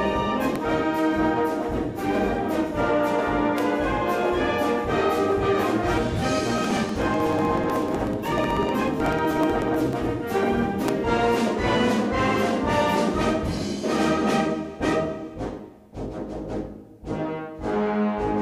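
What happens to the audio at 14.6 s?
Nothing goes wrong at 14.6 s; the audio plays through that moment intact, with no dropout, click or other fault.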